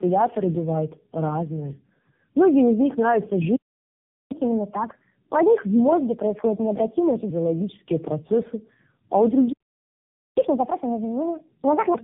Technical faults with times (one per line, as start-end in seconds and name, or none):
0.00-12.04 tandem speech coding
4.32-7.29 catch-up at higher speed
10.38-11.94 catch-up at higher speed